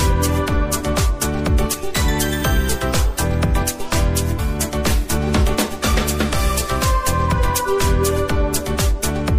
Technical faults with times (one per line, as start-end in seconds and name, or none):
0.00-9.38 MP3 compression
4.38 compressed frames skipped